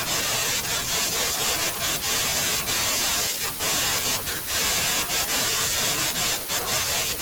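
From start to finish the speech carries a block size mismatch (truncated). Each stage hands on longer blocks than the next one reads, so the tail of every block is discarded. That leaves a buzz at about 43.1 Hz and delivery running 1.12 times too fast, which fits a 1024-sample read size. Pitch stays close to normal, which rules out a plain sample-rate error. Nothing is duplicated or padded, so there are no stutters or slowed gaps.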